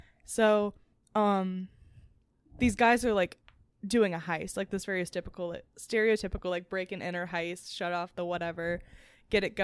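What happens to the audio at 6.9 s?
Nothing goes wrong at 6.9 s; the speech carries on cleanly through that moment with no dropout, click, glitch or other audible fault.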